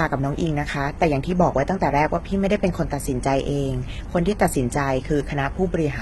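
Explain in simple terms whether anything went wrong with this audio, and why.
The whole speech clip has a gritty, metallic treble with nothing above 11.8 kHz, likely from heavy HE-AAC compression faking the highs by copying lower sounds upward.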